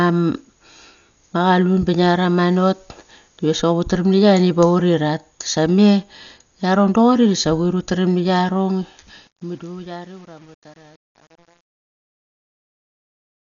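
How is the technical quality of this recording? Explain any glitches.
The technical quality is poor: the speech is band-limited and coarse throughout, and its closing fade turns gritty.

Throughout, nothing sounds above 6.9 kHz, and the remaining band carries a rough, fluttering noise. This is likely heavy Dolby Digital compression at a low bitrate around 48 kbps, where the encoder narrows the band and the decoder fills unfunded frequency lines with dither noise. Unlike simple low-pass filtering, the damage is noisy and restless, not just dull.

From 8.69 s to 13.40 s there is truncation distortion on a fade. The fade-out begins around 8.7 s and ends at 13.4 s. From 9.03 s onward it becomes grainy. The fading stage keeps too few bits, which fits roughly 9 bits with no dither, so the waveform collapses into a few coarse steps. A clean editor's fade would thin out evenly instead.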